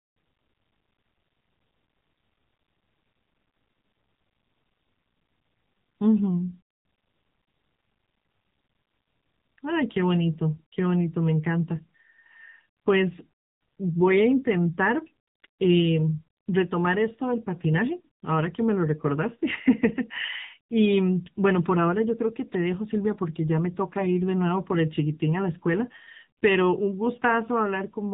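Speech that sounds buzzy, thin and synthetic throughout, with plainly audible coding damage and nothing above 3.8 kHz: the AMR narrowband mobile codec, whose low-rate vocal-tract model, consistent with a mode near 8 kbps, flattens natural texture.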